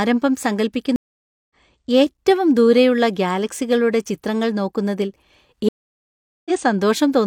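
Speech, interrupted twice by a stream reconnect: the connection dropped, playback went silent, and a fresh decoder picked up mid-stream. At 0.96 s a 545 ms gap runs to 1.55 s, and the speech resumes roughly 0.4 s further on. At 5.69 s a 770 ms gap runs to 6.51 s, skipping about 0.7 s. On a waveform each appears as a flat, empty block with the return faded in, and a spectrogram shows clean vertical edges with no energy between them.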